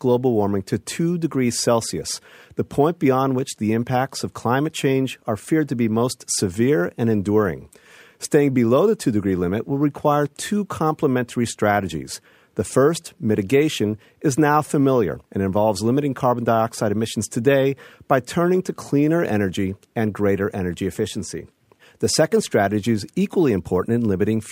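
From start to finish, the speech has been through a crude rate conversion that repeats samples with no filtering, in a fixed 3:2 pattern that fits a step from 32 kHz up to 48 kHz. Each repeated sample leaves a small step in the waveform, and because the pattern cycles regularly, the error forms tones unrelated to the speech, sitting roughly 25 dB below it. These are heard as a gritty, inharmonic fizz that rides on louder and brighter syllables.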